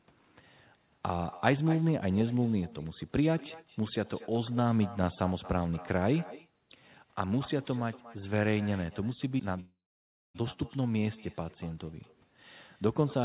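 Throughout, an echo with no canceller shadows the speech: a quieter copy, about 19 dB down, returns roughly a fifth of a second later, appearing on a spectrogram as a faint, delayed duplicate of every syllable.

From 9.6 to 10.37 s, a call audio freeze holds the sound as a short fading buzz, then about 0.59 s of silence, likely from delayed packets draining the jitter buffer. The waveform flattens, and speech resumes without loss.

The spectrogram shows nothing above 4 kHz throughout, which fits a narrowband call codec.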